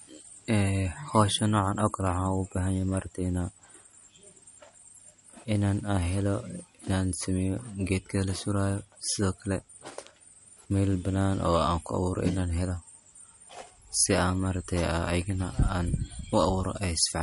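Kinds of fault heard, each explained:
MP3 compression: throughout the speech, nothing sounds above about 11.2 kHz, and coding damage is plainly audible. This is likely a low-bitrate MP3 encoding, perhaps 48 kbps, where the encoder cut the treble and discarded weaker frequency detail to save bits.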